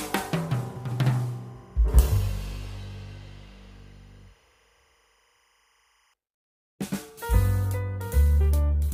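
A faint, steady chirping warble runs from the start to 6.14 s: timecode bleed, 25-frame linear timecode leaking in, switching between roughly 1 and 2 kHz.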